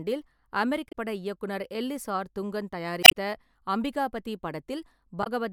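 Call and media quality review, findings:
Damaged data in a compressed stream at 0.88 to 0.94 s, 3.00 to 3.14 s and 5.20 to 5.27 s. Short glitches in the speech. Decoder misreads corrupt frames, loses sync and resyncs on the next header. Second event adds about 6 ms.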